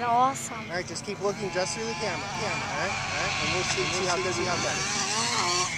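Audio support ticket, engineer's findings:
Second capture path or misaligned edit likely holding two copies out of step: doubled audio track, 2.35 s to 4.65 s. Full-band copy trails by around 400 ms at roughly equal level. No decay or room colour; copy appears and vanishes abruptly.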